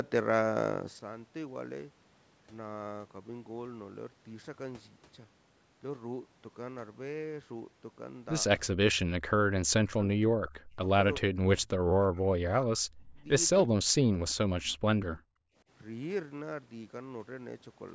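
From 9.06 to 15.14 s the speech is repeatedly pulled down, at 9.06–9.54, 9.77–10.8, 11.18–12.34, 12.62–13.25 and 13.7–15.14 s. Dips reach about 35 to 40 dB, and the sound thins and breaks apart. This is likely speech suppressed in double talk, with the echo canceller mistaking overlap for echo. The waveform shows deep notches, and the spectrogram shows the harmonics vanishing in patches below the 8 kHz top.

At 15.41–15.56 s the background gated by the echo canceller drops by about 27 dB for a brief moment, then returns. This shows as a short, near-silent gap in the waveform and a dark vertical band across the spectrogram.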